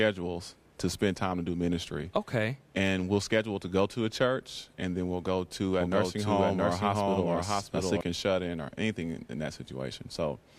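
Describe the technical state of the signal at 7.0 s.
At 7.0 s a doubled audio track is present (5.81–8.01 s): a second full-band copy trails by roughly 0.7 s at about equal level, likely from a slower capture path.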